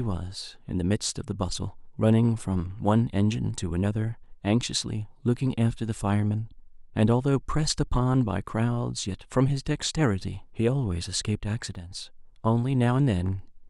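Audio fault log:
11.75–11.91 s, sudden gain jump: speech and background noise drop together by about 6 dB at once, likely from a gain change applied without any ramp.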